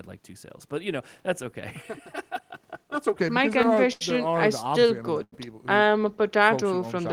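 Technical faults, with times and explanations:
1.82–3.16 s, channel delay (comb filtering): one channel arrives roughly 3 ms late and the two are summed to mono, so shared content cancels at evenly spaced frequencies from around 200 Hz upward, leaving the speech hollow and phasey with fixed spectral notches.
3.93–4.02 s and 5.24–5.33 s, short stall from a late packet: each time a packet arrived late, the jitter buffer ran dry and the receiver held the last sound for 82 ms and then 87 ms before resuming where it stopped, so nothing is lost but sound lingers with a slight buzz or dip.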